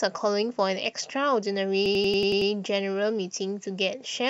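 From 1.86 to 2.51 s a system hang loop takes over: the host froze while the audio hardware replayed one 92.9 ms slice, fitting a 4096-sample buffer, seven times. It sounds like a machine-gun stutter at 10.8 Hz. On a waveform it shows as identical repeated blocks, and on a spectrogram as vertical seams.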